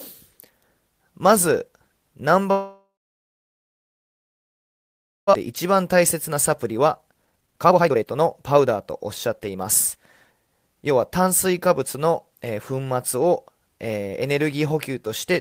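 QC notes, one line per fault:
2.51 to 5.35 s, long network dropout: the speech breaks off and the last sound trails into a fading buzz, then about 2.4 s of near silence before the audio resumes with roughly 1.6 s of content simply gone. Likely cause: packets stopped arriving and the receiver concealed, then gave up.
5.47 to 12.07 s, jitter buffer speed-up: the speech runs about 17 percent fast at unchanged pitch and sounds hurried. Tiny pitch-period slices were cut again and again, around a second in all, to drain the backlog that built up after the dropout.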